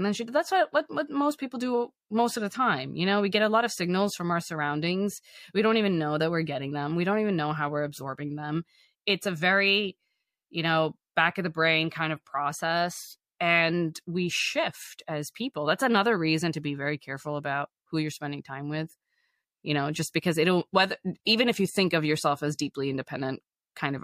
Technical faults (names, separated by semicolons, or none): none